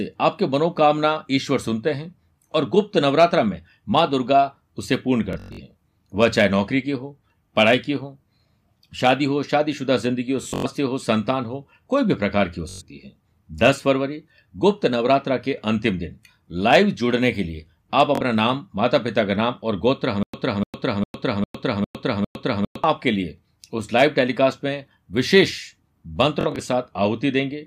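At 5.33 to 5.61 s the speech breaks into a rapid buzzing stutter, a machine-gun repetition of one tiny slice, and it comes back at 10.43 to 10.66 s, 12.69 to 12.82 s and 18.15 s. This is Bluetooth stutter. Audio packets arrived late or not at all, so the receiver kept replaying its last short buffer, in slices that fit frames of about 21 ms. About 190 ms went missing in the first burst and about 170 ms in the second, each spread over roughly a quarter second with runs up to 107 ms. When the speech resumes it has skipped ahead past what was lost.

From 20.23 to 22.84 s there is a different stutter with silent gaps. A fragment of about 0.3 s plays, then dead digital silence of about 106 ms follows, and the same fragment returns six times on an even cycle of about 0.4 s. The likely cause is a stalled player or stream that replayed its last fragment on each retry and then ran dry, so the audio meant for that stretch never plays.

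Bluetooth stutter returns at 26.41 to 26.59 s as a shorter buzz. About 85 ms drops out there, scattered over about 170 ms.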